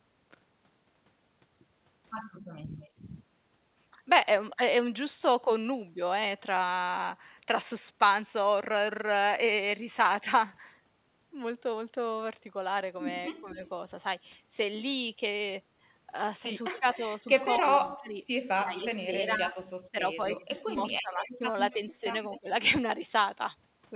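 Around 2.57 to 3.02 s the speech dips by about 15 dB, for roughly a fifth of a second in total. That's speech suppressed in double talk, likely from the echo canceller turning everything down while both ends talked at once. Inside that stretch, 2.80 to 2.90 s, there's a faint echo leak: a copy of the speech about 247 ms late, sitting about 30 dB down. It's likely residual loudspeaker echo the far-end canceller didn't fully remove and sent back.

The same pairing returns at 13.32 to 13.59 s, with a gentler dip of about 10 dB over roughly 150 ms. Echo comes in from 13.39 to 13.69 s, at 252 ms delay and about 20 dB below the speech.

The long one runs from 16.71 to 22.48 s. The speech keeps getting chopped, with drops up to about 20 dB that add up to around two seconds. Echo leaks through at 16.75 to 16.97 s and again at 20.37 to 22.38 s, delayed 254 to 256 ms and about 20 dB down.

The whole clip has nothing above 4 kHz, which fits a narrowband G.711 call.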